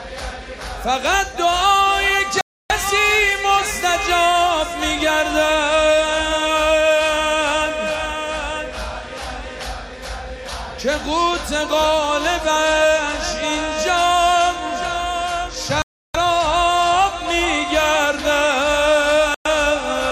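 At 2.41, 15.82 and 19.34 s the sound drops to silence for about 0.29, 0.32 and 0.11 s, then resumes: a Bluetooth stall, likely from interference delaying packets until the headphone buffer emptied. Waveform and spectrogram show clean, abrupt full-band gaps.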